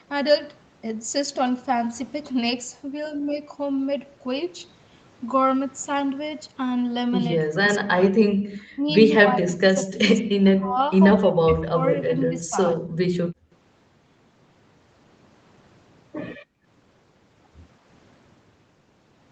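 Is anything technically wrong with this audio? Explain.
Yes. From 7.51 to 12.83 s the speech repeatedly dips or cuts out in pieces, at 7.51–8.32, 8.51–8.83, 9.19–10.0, 10.21–10.79, 11.17–12.57 and briefly at 12.8 s, with the deepest drops close to silence. This is likely speech suppressed in double talk: with both sides talking at once, the echo canceller mistook this talker for loudspeaker echo and turned it down.

At 13.11–13.52 s and 16.37–16.66 s the room sound drops out abruptly, by about 38 dB and about 35 dB, then returns. This is background gated by the echo canceller, which clamped the microphone hard while the loudspeaker played and released it afterwards. The audio tops out around 8 kHz, from the call path's bandwidth.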